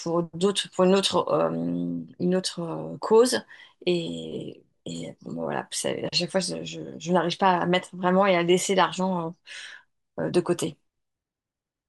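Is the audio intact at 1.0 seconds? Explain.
Yes, at 1.0 seconds the speech plays through cleanly with no dropout, click, distortion or other fault to be heard.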